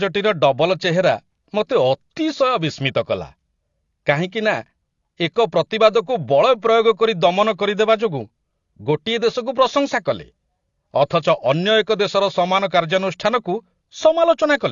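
From start to end, the speech carries AAC compression damage, likely from low-bitrate AAC-LC. Nothing sounds above about 7.1 kHz. Sibilants turn fizzy and sustained sounds warble. The coarse spectral quantising fits a rate near 32 kbps.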